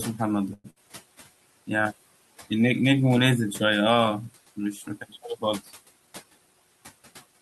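From 0.53 to 0.79 s the sound stalls. The last sound is stretched into a fading buzz for about 108 ms, with a brief silence of about 10 ms. This is likely a call audio freeze: packets were held up and the jitter buffer ran dry. The sound then picks up where it stopped.

Inside that stall, from 0.70 to 0.78 s, comes a burst of packet loss. About 59 ms is filled with a held, fading continuation of the previous sound. Then the audio jumps ahead, and about 60 ms of real speech is gone.

Between 4.56 and 5.23 s, the noise suppressor cuts speech. It mistakes quiet parts of the speech for background. They drop by up to about 15 dB, about a fifth of a second in all. Those parts sound swallowed and faint. The room noise, about 20 dB below the speech, is pushed down with them.

From 5.93 to 6.77 s a jitter buffer speed-up occurs. The buffer had built up extra delay. To shed it, the receiver trims tiny pitch-length slices, removing about a tenth of a second. 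The speech runs at 113% speed with unchanged pitch and sounds hurried.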